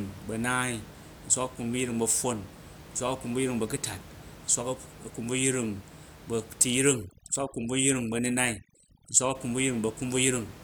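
A speech recording with room noise sitting about 19 dB below the voice. From 6.82 to 9.35 s, overdone noise removal strips out bands near the noise level. The background drops and breaks up into twinkling specks.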